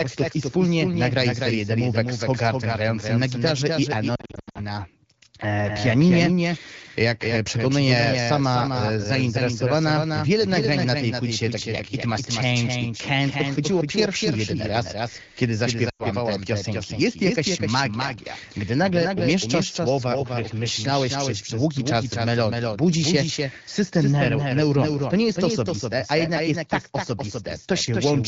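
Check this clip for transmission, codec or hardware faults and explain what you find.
Two faults are present: a doubled audio track running through the whole clip, and two bursts of lost AMR speech frames. The speech has the band-limited character of AMR wideband (HD Voice) coding, consistent with a rate around 12.65 kbit/s, with light codec colouring.

Doubled audio track, throughout: a second full-band copy of the speech trails the original by roughly 300 ms, at about 5 dB lower level. It carries no reverberant decay or room colouration, so it sounds like a clean slapback echo of every syllable. This is likely caused by the same signal being captured twice, once through a slower path, or by an edit that left two misaligned copies mixed together.

Lost AMR speech frames, 4.15 to 4.59 s, just after "grającym na gitarze i": over roughly 400 ms, about 280 ms of speech is missing in scattered gaps, the longest run about 80 ms. 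Frames that failed their checksum after radio errors were concealed by the decoder, which repeated the last good pitch and vocal-tract parameters at falling gain. The result is a choppy warble with short fading dropouts, and the voice comes back briefly weak and rough.

Lost AMR speech frames, 15.89 to 16.06 s, between "pierwszy jedyny raz kiedy" and "te piosenki": about 100 ms of speech is lost and concealed the same way. The sound drops to near silence within two frames, as expected for wideband concealment. Speech resumes weak or rough before it recovers.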